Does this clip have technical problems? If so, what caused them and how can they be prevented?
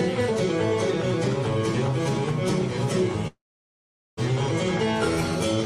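Yes. Between 3.27 s and 4.19 s there is a long network dropout, likely caused by the stream stalling so that about 0.9 s of audio never arrived. The sound breaks off and the last fragment is stretched into a short, fading buzz. About 0.79 s of near-silence follows, and the audio then resumes with the lost portion simply gone. On a spectrogram this appears as a brief smeared band decaying into an empty dark block. The waveform collapses to an almost flat line for that stretch. A larger jitter buffer, forward error correction or a more stable connection would prevent it.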